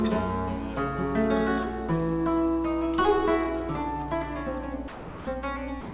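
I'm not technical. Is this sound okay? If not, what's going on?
No, not quite. Twice near the end, the sound cuts out and a bit of steady filler noise, called comfort noise, sits in its place: from 4.88 to 5.27 s, and again from 5.81 s to the very end. That's likely sound dropped by the voice detector: the sending side mistook the sound for background, stopped sending it, and the receiving side filled the gap. Separately, the whole clip has a phone-call quality, with nothing above 4 kHz.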